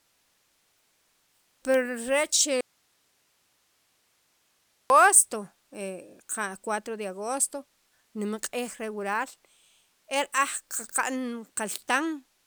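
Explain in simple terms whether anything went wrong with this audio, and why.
Between 2.61 and 4.90 seconds the speech cuts out suddenly for about 2.3 seconds. Only a very faint hiss remains. This is an audio dropout to a faint residue. The signal was likely lost upstream while the recording path stayed live.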